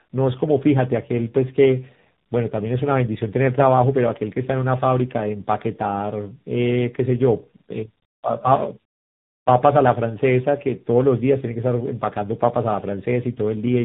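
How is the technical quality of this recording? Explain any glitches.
The recording is marked by one fault running through it. Tandem speech coding, throughout: G.726 at 24 kbit/s, then G.711, then AMR-NB at 7.4 kbit/s, each re-encoding degraded output, leaving speech rough, muffled and warbly, with nothing above 3.8 kHz.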